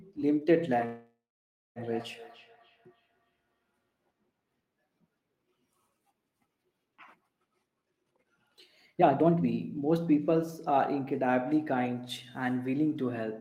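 From 0.7 to 3.88 s a feedback echo between two devices repeats each word roughly every 0.3 s, peaking at about 20 dB below the speech. A spectrogram shows faint, thinning copies stacked at that spacing.

From 0.85 to 1.79 s a call audio freeze, likely from delayed packets emptying the jitter buffer, stretches the last sound into a fading buzz or hiss. It then goes silent for 0.56 s, shown as a flat waveform gap. The speech resumes intact about 0.9 s later.

A jitter buffer speed-up runs speech at 131% from 7.74 to 10.33 s, trimming roughly 0.7 s, then at 107% from 10.79 to 11.95 s. Pitch holds steady while syllables look compressed in time.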